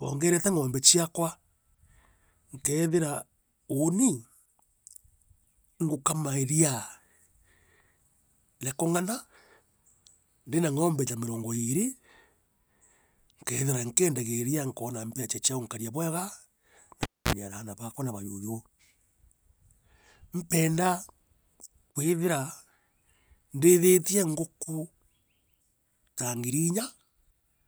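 At 17.03 s the cable gets pulled and plugged in: a pop, about 250 ms of near silence, then roughly 45 ms of 60 Hz mains buzz as the plug's tip touches first, and a second pop around 17.33 s before "aana bakwa na".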